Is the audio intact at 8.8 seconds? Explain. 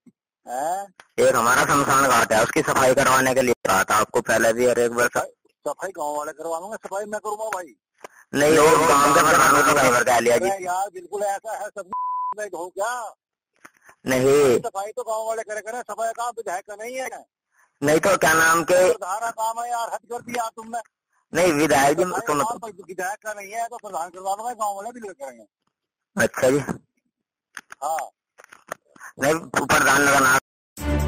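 No, a doubled audio track runs from 8.49 to 9.91 s: a full-band copy trails about 150 ms behind at roughly equal level, likely from a second, slower capture path.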